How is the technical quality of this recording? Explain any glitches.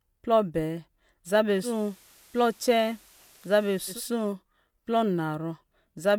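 The speech has one glitch. From 1.61 to 4.01 s, digital radio blending to analogue: the receiver cross-faded over about 136 ms to FM, adding faint hiss.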